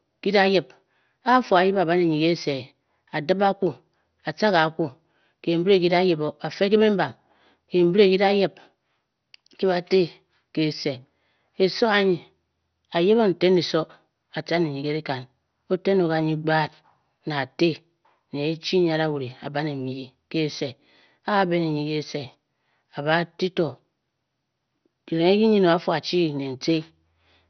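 From start to finish the speech sounds dull and gurgling, with a granular, watery roughness. The likely cause is heavy MP2 compression at a low bitrate, something near 48 kbps. With too few bits, the encoder switches off whole upper sub-bands and coarsely quantises the rest. On a spectrogram, energy stops sharply at about 6.1 kHz, and patches of the remaining bands blink on and off, giving a blocky, smeared texture.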